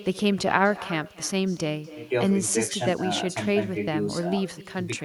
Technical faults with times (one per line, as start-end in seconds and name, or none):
0.00-5.04 echo with no canceller